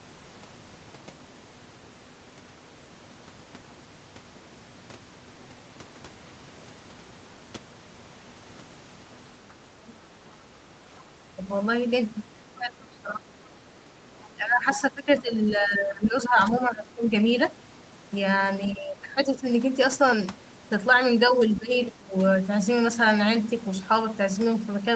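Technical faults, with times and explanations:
9.48–11.37, 12.58–17.08, 18.73–19.46, 21.31–22.14 s: speech suppressed in double talk. The talker dips by about 10 to 20 dB in patches, likely because the echo canceller ducked both sides at once, unlike a clean packet dropout.
9.88–9.92, 12.80–12.84, 14.23–16.06, 21.56–21.90 s: other side's voice leaking through. A second voice sits about 15 to 35 dB under the talker, in brief scraps and one longer stretch, likely uncancelled loudspeaker echo rather than background noise.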